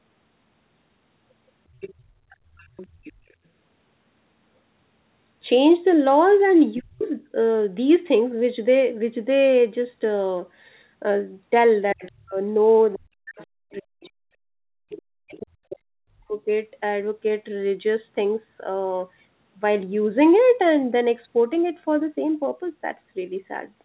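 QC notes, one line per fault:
1.8–3.33 s, 7.0–7.04 s, 12.05–13.46 s, 14.05–14.09 s, 14.9–15.02 s: other side's voice leaking through. A second, fainter voice sits under the main talker, about 20 dB down in the first stretch, about 35 dB down at 7.0 s, about 25 dB down from 12.05 s, and about 30 dB down in the two short scraps after 14 s. The likely cause is loudspeaker playback that the echo canceller did not fully remove from the microphone.
6.77–7.36 s, 11.93–12.37 s, 12.97–16.47 s: speech suppressed in double talk. The talker's level falls by up to about 40 dB, so the speech dips and breaks up for roughly half a second, then under half a second, then about three seconds in the longest run. These drops line up with the leaked far-end voice at 7.0 s, 12.05 s and after 14 s. The likely cause is an echo canceller that could not tell the near talker from the echo during overlap and attenuated both.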